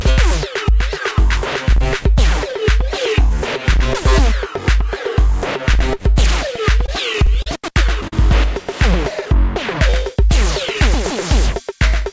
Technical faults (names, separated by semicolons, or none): repeated stalls (stutter); short stall from a late packet